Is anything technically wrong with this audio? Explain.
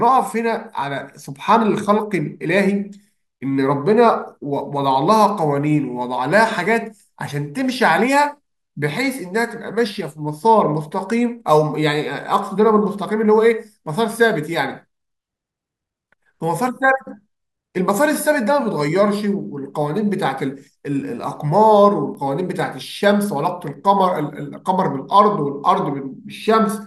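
Yes. Dropped buffers (overrun) at 3.08, 6.66 and 22.15 s: each is a skip where the speech jumps forward, losing a short slice of around 15 ms with no gap. The likely cause is samples not being collected before the hardware overwrote them, so the surviving audio on either side is butted together.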